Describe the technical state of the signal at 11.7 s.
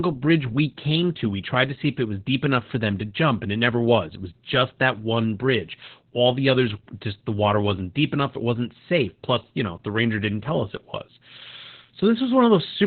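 At 11.7 s, as throughout, Opus voice compression is running in its SILK narrowband mode, which fits a rate near 8 kbps, coarsely coding the excitation and discarding everything above about 4.3 kHz. The speech sounds muffled, hoarse and faintly robotic.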